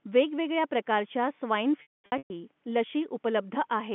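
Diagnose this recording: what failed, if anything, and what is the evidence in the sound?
Network stage: packet loss with pitch repetition, 1.82 to 2.30 s. 400 ms went missing, scattered over 480 ms. Short gaps sound held and buzzy. The longest, 220 ms, fades to silence. The receiver looped the last pitch period to bridge each loss.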